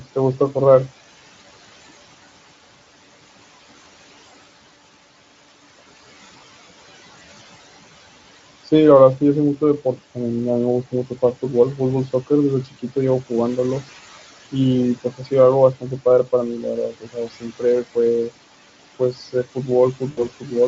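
Noise suppressor artifacts run through the whole clip. The suppressor pulls down the bands it judges to be steady noise by about 16 dB, frame by frame, so the room noise, which sits about 16 dB below the speech, dips in the gaps and swells back under the talking.

Speech cut by the noise suppressor comes at 12.64–13.83 s, 14.96–15.32 s, 15.74–16.28 s, 16.61–18.30 s and 18.99–20.53 s. Here the suppressor mistook quieter stretches of speech for noise and turned them down along with the background, by about 16, 17, 11, 19 and 12 dB respectively. Soft consonants and word endings sound swallowed, for roughly a fifth of a second in the first cut and close to three quarters of a second in the fourth.

VoIP packet loss concealed by the speech codec follows at 20.11–20.27 s, inside the last suppressor cut. About 60 ms of audio went missing, which fits three lost 20 ms frames. The decoder bridged the gap by extending its last pitch and spectral shape while fading the level, so the sound briefly smears into a buzzy tone or a coloured noise that fades.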